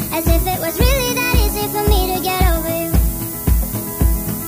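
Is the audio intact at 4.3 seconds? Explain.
No, low bit depth with noise shaping runs throughout, including 4.3 s: only 5 bits, with rounding error pushed upward into a steady, thin hiss nearly as loud as the sound.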